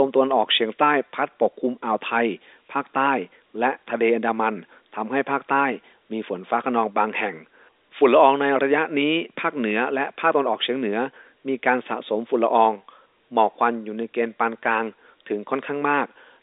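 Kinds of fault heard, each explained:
No faults can be heard anywhere in this clip.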